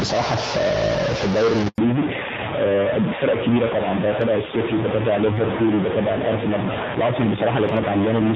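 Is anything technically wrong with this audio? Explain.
Yes, a few things. A stuck bit runs through the whole speech clip, most likely a data bit fixed at one value, adding distortion and filling the pauses with noise. At 1.68 s there's a handover gap: the call switched networks, no frames came through, and the voice drops out for 100 ms until 1.78 s. From 1.78 s on, there's a fallback to narrowband. Everything above 4 kHz is gone, which fits a switch to AMR-NB at around 5.9 kbit/s, so the speech sounds duller and rougher.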